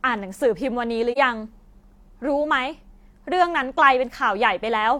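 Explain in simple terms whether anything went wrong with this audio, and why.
Around 1.12 to 1.18 s the speech briefly drops out in a soft-edged gap of roughly 43 ms, which fits a single lost chunk of compressed audio. That's AAC frame loss with muting: the decoder filled the missing piece with silence, fading out and back in.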